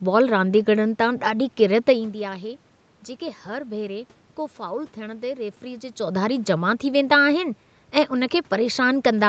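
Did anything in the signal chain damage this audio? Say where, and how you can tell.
No, nothing damaged it.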